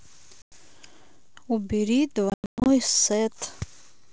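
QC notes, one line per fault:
0.42–0.53 s and 2.30–2.67 s, packet loss on an ADPCM call: a 100 ms hard-edged silence, then 280 ms of gaps scattered over 360 ms (longest 120 ms). The decoder's predictor and step size drift, so the audio returns slightly distorted. Waveform shows flat holes; spectrogram shows blank vertical bands.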